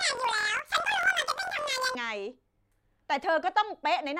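From the start to 1.97 s the speech sounds an octave high with a rapid flutter at about 43.1 Hz, yet it keeps its normal pace. This is planar audio read as interleaved. Each block of about 23.22 ms stores all left samples and then all right samples, but it is read as alternating pairs, so each block plays twice at double speed, left then right. The flutter rate fits a 1024-sample block.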